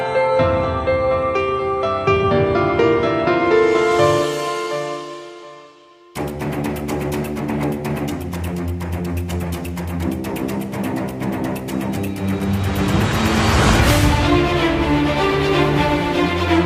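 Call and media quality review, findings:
Nothing stood out on listening, and no fault was found to log against any component.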